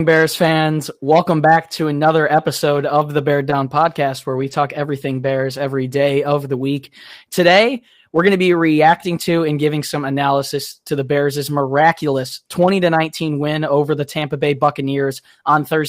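Two brief rough, noisier patches, at 4.39 to 4.53 s and 5.23 to 5.29 s, are lost packets rebuilt from error correction: low-bitrate copies carried in following packets, consistent with about four and two lost.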